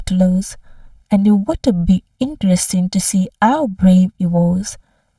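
Channel delay (comb filtering) runs throughout: one channel lags by about 1.5 ms before mono summing, cutting notches from around 400 Hz upward and leaving the speech hollow.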